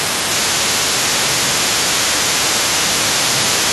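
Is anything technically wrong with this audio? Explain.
Yes. Speech suppressed in double talk at 0.0–0.13 s, 0.96–1.76 s and from 2.03 s onward: the speech dips by up to about 20 dB, likely an echo canceller turning both sides down. This is a partial duck, not a dropout's clean silence.

The other side's voice leaking through at 0.0–0.97 s, 1.21–2.04 s and from 2.36 s onward: a second voice sits roughly 20 dB under the speech, likely loudspeaker echo left behind by the canceller. Unlike reverb, it is separate speech rather than a tail.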